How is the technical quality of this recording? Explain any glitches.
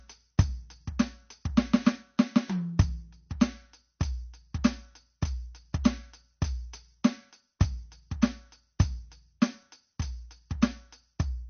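Technical quality is poor, with two audible faults in the music.

Throughout, the treble stops dead at 6.5 kHz and the sound turns watery and swirly, likely from MP3 compression at a very low bitrate around 32 kbps. A spectrogram shows a flat ceiling with flickering gaps below it.

At 7.60 s, a pre-echo puts a brief hiss about 10 ms ahead of an attack, as block-spread quantisation noise leaks backward, visible as a smear before the waveform's onset.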